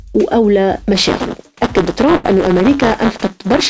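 From 0.95 s to the end, buffer tearing produces a steady robotic rattle at 188 Hz, which fits a 256-sample buffer. Each period splices in a small slice of audio roughly 10 ms old. The spectrogram shows fine vertical striations, and the waveform shows hard steps.

Between 2.16 and 2.26 s, a burst of packet loss leaves 77 ms of filled sound and 80 ms of audio missing. The last sound is held and fades, appearing as a smeared, dimming band before an abrupt restart. The G.722 call path leaves nothing above 8 kHz throughout.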